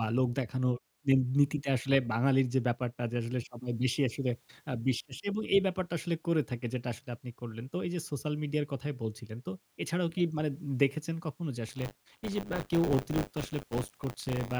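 A speech clip that, from 11.68 s to the end, takes on a robotic 100 Hz buzz riding on the signal. This is buffer tearing: writer and reader of the ring buffer have slipped, so about a tenth of each 10 ms period replays audio from roughly 30 ms earlier, with hard joins.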